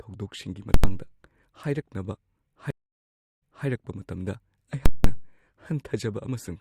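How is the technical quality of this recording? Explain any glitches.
Two kinds of glitch interrupt the speech.

From 0.74 to 0.84 s and 4.86 to 5.04 s, invalid numbers at full scale pin the output to one extreme value, fitting 4096- and 8192-sample blocks. You hear loud pops; a waveform shows solid flat-topped slabs.

From 2.71 to 3.66 s, a stream reconnect leaves 643 ms of silence, then a fresh decoder resumes 313 ms earlier, repeating audio. The waveform shows a gap, then a soft fade-in.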